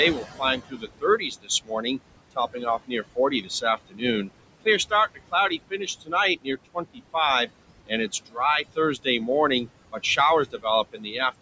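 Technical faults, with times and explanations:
Throughout, noise suppressor artifacts: the room noise, sitting about 12 dB below the speech, is pulled down by about 21 dB between words and rises again beneath them.
0.16–1.99 s, 2.31–4.29 s, 4.65–7.15 s, 7.86–9.28 s, 9.65–10.18 s and 10.52–11.15 s, speech cut by the noise suppressor: softer parts are mistaken for noise and dropped by about 14 to 21 dB, roughly two and a half seconds in all, so they sound swallowed.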